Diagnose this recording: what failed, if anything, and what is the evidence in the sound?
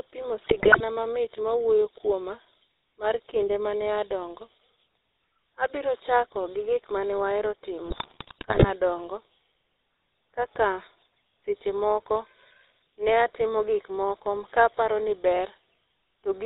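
Codec stage: GSM full-rate coding throughout. The speech sounds buzzy and gravelly, with nothing above 4 kHz, which fits the 13 kbps full-rate pulse-excited coder.

Network stage: GSM bit errors from 0.44 to 0.81 s and from 7.86 to 8.70 s. Corrupted filter, pitch and gain values cause squawks, pops and gargling.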